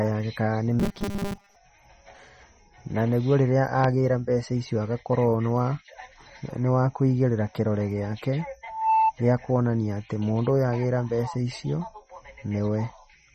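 Throughout the recording the speech has a watery, swirling quality, with plainly audible codec damage. This is likely MP3 compression at a bitrate starved enough to fit about 32 kbps. With too few bits, the encoder chops off the treble at a fixed frequency and drops quiet spectral lines, which flicker in and out between frames, leaving the sibilants and consonant onsets smeared and metallic.

Just after "yake kana nĩ", from 0.80 to 1.56 s, the speech turns into a rigid, metallic buzz pitched at 200 Hz. It still loosely tracks the speech but has lost its natural movement. This is robotic sound from repeated short buffers, likely because fresh audio was arriving too late. The playback kept looping a 5 ms chunk, which sets the 200 Hz pitch, and most of that stretch was repeated material rather than new audio.

After "wa kũigĩrĩra kĩrore gĩake", from 8.65 to 9.13 s, a single 886 Hz tone swells over roughly a third of a second into a squeal about 5 dB louder than the speech, and it cuts off before "gĩa kuonania atĩ mũndũ". 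This is loudspeaker feedback squeal. The microphone picked up its own loudspeaker, and at 886 Hz the loop gain exceeded one, so that frequency kept building on itself.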